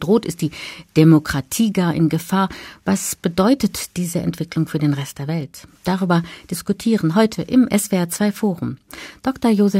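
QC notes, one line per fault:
No technical faults are audible anywhere in the recording, and the signal path shows nothing that needs correcting.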